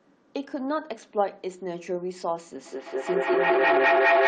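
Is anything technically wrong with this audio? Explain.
Yes. From 2.66 s to the end of the clip, a feedback howl takes over: a ringing tone around 700 Hz swells up beneath the speech, pulsing roughly every fifth of a second and peaking at about 9 dB louder than the talker. It happens when two devices in the same room join one call. Each pass from microphone to loudspeaker and back adds gain, so the repeats build rather than fade, narrowing onto the pitch the loop favours and throbbing at its round-trip delay.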